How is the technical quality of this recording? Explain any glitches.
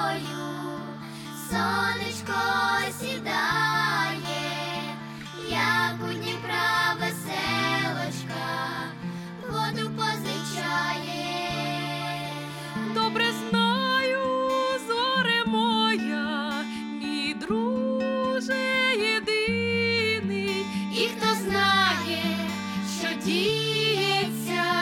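No technical glitches turn up anywhere in the recording. Nothing interrupts or distorts the audio at any point, so there are no faults to explain.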